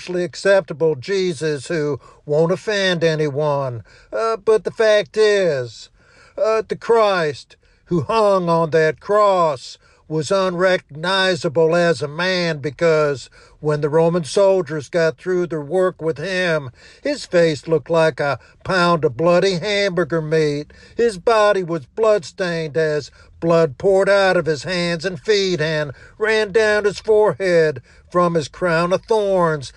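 No technical faults can be heard anywhere in this audio. Nothing in the signal chain stands out at any point.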